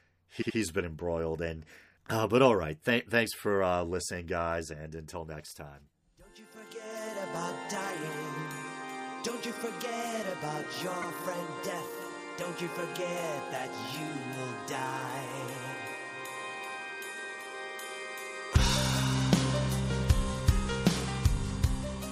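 Repeated frames: a short run of compressed data was sent more than once, so the decoder replays the same slice. From 0.41 to 0.56 s a block of about 78 ms plays two extra times, which fits a run of three frames, adding about 157 ms and giving a stutter. At 11.01 to 11.06 s a 52 ms block repeats once, a briefer hiccup adding 52 ms.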